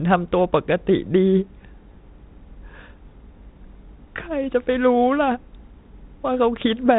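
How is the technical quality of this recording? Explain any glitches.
Nothing stood out as a glitch on listening to this speech, which has the narrowband sound of telephone-style coding, with nothing above 3.9 kHz.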